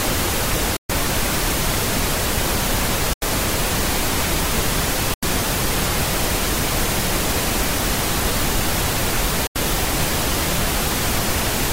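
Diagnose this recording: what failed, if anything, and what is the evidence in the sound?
The sound cuts out four times, leaving short holes of silence at 0.77 to 0.91 s, 3.13 to 3.23 s, 5.14 to 5.24 s and 9.47 to 9.57 s. Each time the audio resumes further along, as if it had kept playing. The first gap loses about 128 ms and the others about 85 ms each, which fits whole frames of roughly 21 ms being discarded. This is likely a Bluetooth dropout on the wireless playback link, where late packets are dropped and output mutes until good ones arrive.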